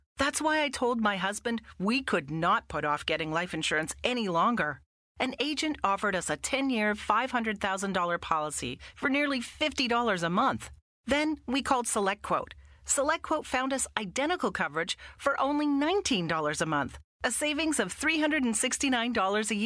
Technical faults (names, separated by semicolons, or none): none